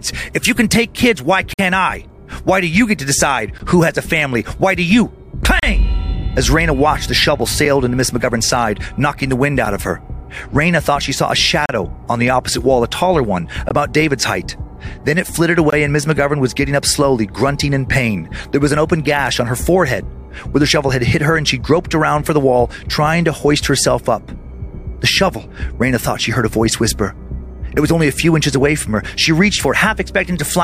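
Gap between stream segments at 1.53–1.59 s, 3.58 s, 5.60–5.63 s, 7.65 s, 9.65 s, 11.66–11.69 s, 13.69 s and 15.70–15.73 s: every 2 s, where one segment hands over to the next, the time stamps leave a small gap that the player fills with silence. Each sounds like a hard-edged dropout lasting between 7 and 52 ms, and the longest comes first. Nothing is lost; the silence is simply inserted between segments.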